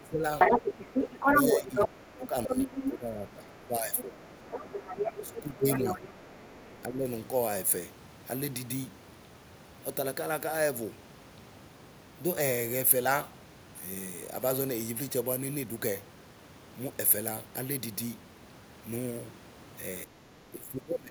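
From 0.0 to 0.24 s the talker dips by up to about 25 dB. That's speech suppressed in double talk, likely the echo canceller ducking everything while both ends talk. From 0.39 to 1.88 s the other side's voice is leaking through, likely loudspeaker echo the canceller didn't remove. It sits a bit louder than the talker. Suppression returns from 1.33 to 4.21 s, and more leakage comes in at 2.21 to 2.92 s at about the talker's level, then at 3.95 to 6.82 s slightly quieter. The talker gets pushed down again from 5.25 to 6.02 s, from 6.87 to 7.07 s, and from 20.05 s to the end.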